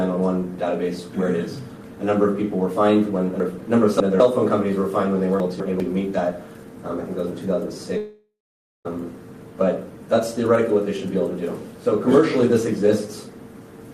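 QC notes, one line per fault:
3.40–4.20 s and 5.40–5.80 s, chunks out of order: the audio is cut into 200 ms blocks, and one block plays late, three blocks late in the first span and one block late in the second. Nothing is missing, but each span has three hard joins where unrelated blocks meet, so the passage sounds jumbled. On a spectrogram, the harmonic traces break off and restart at vertical seams 0.2 s apart. On the waveform, the envelope steps abruptly at each seam.
7.97–8.87 s, long network dropout: about 0.88 s of audio never arrives, likely because of a network dropout. The receiver covers the gap by continuing the last sound as a buzz or hiss that fades out, then plays silence for roughly the final half second before the audio resumes further on, with the lost part skipped. On the waveform, a decaying tail gives way to a flat line. On the spectrogram, smeared repeating bands fade into an empty gap.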